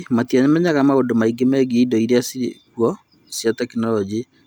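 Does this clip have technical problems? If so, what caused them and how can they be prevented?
Yes. The converter's sample clock suffers from sample clock jitter across the whole speech clip: its timing wanders at random by something on the order of a microsecond or two, so each sample is captured slightly early or late. Where the waveform changes fastest, that timing error becomes an amplitude error of roughly 40 dB below the signal. This is heard as a faint hiss or roughness riding on louder and brighter speech sounds, disappearing in the pauses. Preventing it means clocking the converter from a clean, low-phase-noise oscillator or a well-designed PLL and keeping digital noise away from the clock line.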